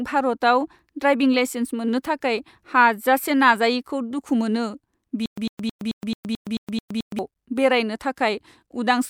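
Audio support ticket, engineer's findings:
Playback or stream stall, likely buffer underrun with retry replaying the last fragment. Stutter with silent gaps, 5.26 to 7.19 s: same 102 ms speech burst repeated 9 times, each followed by 117 ms of digital silence, steady 219 ms period. Speech due in that span lost, not delayed.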